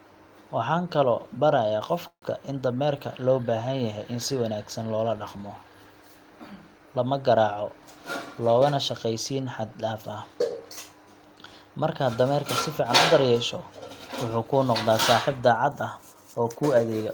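At 2.07 s the packets were likely held up in transit and the jitter buffer ran dry, producing a call audio freeze lasting until 2.24 s. The receiver stretched the last bit of speech into a brief fading buzz, then about 80 ms of silence. When delivery resumed, the speech picked up exactly where it stopped, so roughly 147 ms of gap was inserted and nothing was lost, though everything afterward arrives that much later.

From 14.83 s to 17.09 s a jitter buffer speed-up occurs. The buffer was holding more audio than its target, so the receiver repeatedly trimmed tiny slices, each one or a few pitch periods long, to shrink the backlog by about 150 ms. The speech therefore runs at about 107% of its normal rate while the pitch stays unchanged, giving this closing stretch a slightly rushed, hurried quality.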